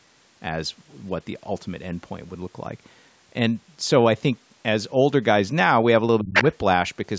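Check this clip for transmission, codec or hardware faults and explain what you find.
Two faults sit near the end of the clip, both from a call's echo handling.

From 6.2 to 6.45 s the speech dips sharply, by about 30 dB at its deepest, for roughly 150 ms in all. This is speech suppressed in double talk. It likely happens because both sides talked at once and the echo canceller turned everything down.

From 6.34 to 6.55 s a second voice comes through, about as loud as the talker. This is the other side's voice leaking through. The likely cause is loudspeaker echo that the canceller failed to remove from the microphone.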